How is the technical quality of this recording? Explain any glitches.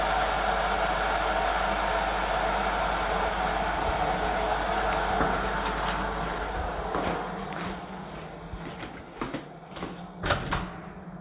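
Nothing stood out on listening to this recording of everyday sounds, which carries the narrow bandwidth of a telephone-style call path with nothing above 4 kHz.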